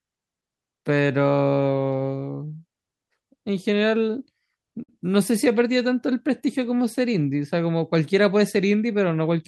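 At about 4.83 to 4.89 s the speech hits a short stall from a late packet: the jitter buffer ran dry, so the receiver held the last sound for roughly 49 ms, then picked up where it left off. Nothing's lost; you just hear a brief smeared hold with a faint buzz or dip.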